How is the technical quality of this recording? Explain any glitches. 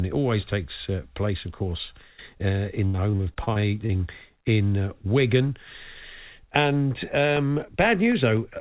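The recording has three distinct glitches. Throughout, the audio is band-limited with nothing above 4 kHz, and its narrow, slightly grainy tone fits a 64 kbps G.711 mu-law telephone codec.

Repeated packet loss (robotic sound) runs from 2.86 to 4.01 s, starting right after "of course uh in". Packets kept arriving late or not at all, and the receiver patched each hole by extending the last bit of sound, only for another hole to follow. About a dozen gaps, the longest 79 ms, leave roughly a quarter of that stretch synthesized. The result is choppy, with pieces missing. Unlike a single loss, the damage persists across the whole stretch.

Short concealed packet loss occurs from 4.41 to 4.44 s. About 20 ms of audio never reached the decoder in time, so the receiver continued the preceding sound and blended back into the real signal. It is heard as a brief smear or wobble. What separates it from the earlier stretch is that it is one isolated event.

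Periodic USB or driver dropouts start at 7.37 s and continue to the end, recurring every 0.25 s. A background task stalls the audio driver or USB bus at a fixed interval, and each time a sliver of audio is replaced by silence. This produces evenly spaced ticks that are audible only while sound is present. Unlike packet loss, the holes are silent rather than filled with extended sound, and they are strictly regular.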